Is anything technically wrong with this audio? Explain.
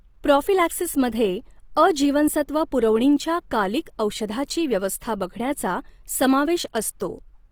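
Yes. There's Opus compression damage all the way through this speech, and it's plainly audible. The bandwidth stays fullband, with content reaching about 20.3 kHz, so it isn't muffled. Instead the sound turns rough and grainy, with a noisy texture. That's likely the codec's music (CELT) mode running short of bits: it keeps each band's energy but fills the detail with folded or noise-like content. The level of damage fits something around 24 kbps.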